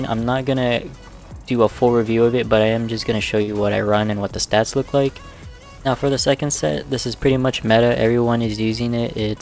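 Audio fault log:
3.42–3.49 s, burst of packet loss: the sound stalls into a held, fading continuation for about 53 ms, then jumps ahead with 60 ms missing. Consecutive packets were lost or late, so the receiver stretched and faded the last audio before resuming.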